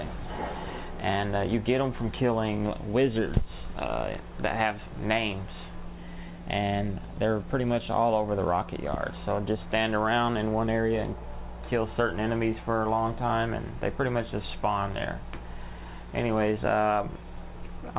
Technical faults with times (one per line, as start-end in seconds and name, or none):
none